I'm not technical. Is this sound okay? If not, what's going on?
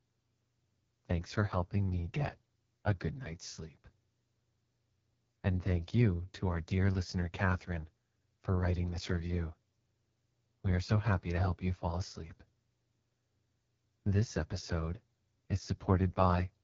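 No. The speech went through the AMR wideband (HD Voice) codec at one of its lowest settings, squeezing the voice hard to save data. Throughout, it sounds rough and raspy, and nothing above about 7.1 kHz remains, so it lacks sparkle.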